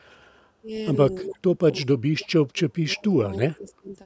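At 0.62 s the speech dips briefly, by about 5 dB, for roughly 70 ms. From 1.22 to 1.58 s it drops much harder, by about 40 dB, and nearly vanishes. Between 1.8 and 3.94 s it cuts out again in pieces, about 35 dB down at worst, adding up to roughly one and a half seconds. This is likely speech suppressed in double talk. The echo canceller could not tell this talker from the far side's echo, so it turned everything down.

Within that stretch, at 3.33 to 3.37 s and again at 3.53 to 3.72 s, a faint delayed copy of the voice played on the loudspeaker appears. It trails the original by 321 ms and sits about 35 dB below it. This is an echo leak, likely from a loudspeaker whose echo canceller let some of the microphone pickup slip back into the call.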